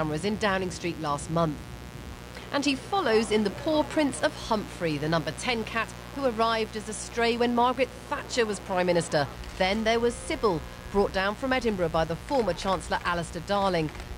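A mains buzz runs through the whole clip. It rides on a 60 Hz mains supply. Sharp switching spikes from a dimmer, rectifier or unshielded path enter twice per cycle. Their harmonics climb into the kilohertz range. The result is a steady, raspy buzz, roughly 15 dB below the signal.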